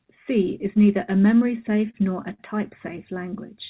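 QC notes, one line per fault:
1.48 to 1.96 s, repeated stalls (stutter): just after "is neither a" and running up to "nor a", the speech catches four times, with about 51 ms of held sound in total and the longest hold about 29 ms. The jitter buffer kept running dry and the receiver stretched the last sound each time, so about a tenth of that stretch drags. Nothing is cut out. Unlike a dropout, there is no silence, only repeated hesitation.
2.34 to 2.41 s, short stall from a late packet: right after "nor a", one sound is held about 49 ms too long, with a faint buzz or dip, before the speech picks up exactly where it stopped. One packet arrived late, with the delay jumping by about 49 ms. The buffer emptied once and the receiver extended the last sound to bridge the wait. It is a single isolated hold, not a cluster like the stutter earlier, and nothing is lost. Across the whole clip, the narrowband call codec leaves nothing above 4 kHz.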